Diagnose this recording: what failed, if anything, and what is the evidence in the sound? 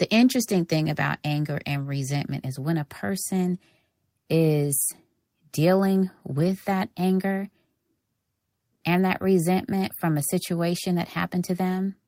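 The failure is at the network stage, showing up as lost packets rebuilt from error correction. There are no dropouts, but the audio turns briefly rough and noisy at 1.73 s for about 20 ms, from 6.35 to 6.53 s for about 100 ms, and at 8.97 s for about 20 ms. That fits single 20 ms packets lost at the first and last points and a run of several at 6.35 s. The decoder filled each gap with the low-bitrate copy carried in the following packet, so continuity held at reduced quality.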